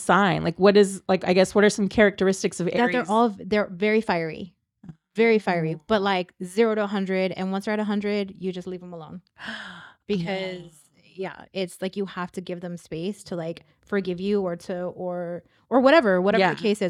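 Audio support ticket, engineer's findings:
Listened through the speech recording and nothing stood out; no issues to log.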